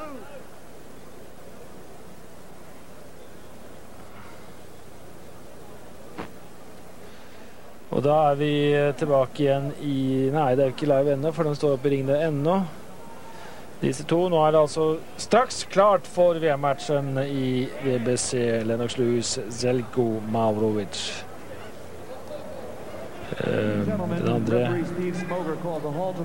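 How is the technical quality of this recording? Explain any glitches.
Nothing here sounds like a glitch: the recording runs smoothly the whole way, without any dropouts, clicks or other interruptions to point out.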